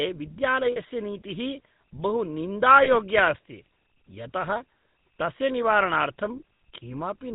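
Speech passed through the GSM full-rate codec, a low-rate vocal-tract model that fits a 13 kbps stream, cuts everything above 4 kHz and leaves a buzzy, gravelly roughness. Lost GSM frames at 0.72 s (about 40 ms) and 2.84 s (about 20 ms) were concealed by repeating the previous frame's settings, producing brief metallic rings.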